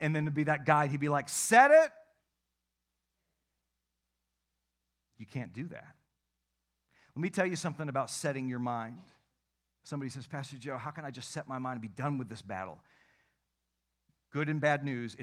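A speech recording with no technical faults to report. Nothing in the audio calls for a time stamp or a cause.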